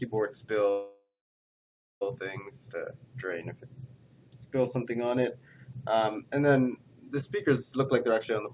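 The audio arrives over a narrowband call path, with nothing above 4 kHz, which fits G.711 A-law at 64 kbps. From 0.7 to 2.03 s there is a call audio freeze: the last sound is stretched into a fading buzz or hiss and then about 0.95 s of silence, and the audio resumes where it stopped, with roughly 1.31 s inserted and nothing lost. The likely cause is delayed packets draining the jitter buffer. From 7.69 to 8.31 s a jitter buffer speed-up follows. To work off the extra delay, the receiver repeatedly cuts short pitch-period pieces, around 150 ms in total, so the sound runs at about 122% speed at unchanged pitch and sounds hurried.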